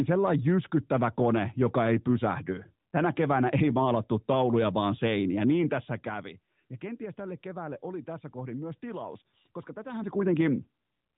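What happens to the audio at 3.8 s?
Nothing goes wrong at 3.8 s: the speech carries on intact through that moment, with no break, dropout or distortion.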